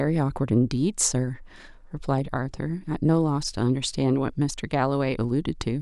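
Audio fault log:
Listening closely to the speech, nothing stood out as a fault.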